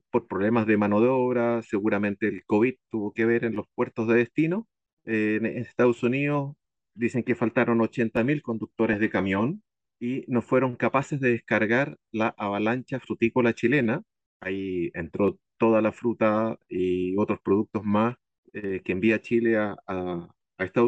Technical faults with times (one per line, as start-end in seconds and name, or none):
8.93 DAB burbling
16.75-16.80 DAB burbling